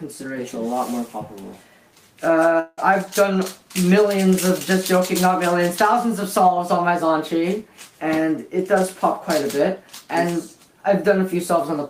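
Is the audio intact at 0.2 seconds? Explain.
Yes, at 0.2 seconds the audio is intact, with no dropout, click, distortion or other fault at that moment.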